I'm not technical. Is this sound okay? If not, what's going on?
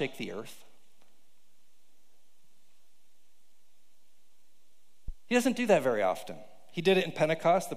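No. At 5.08 to 5.15 s there is a short, deep thump, a phantom power thump. Power to the microphone was switched on or off while recording, and that sudden electrical jolt went through to the sound as a brief, low knock.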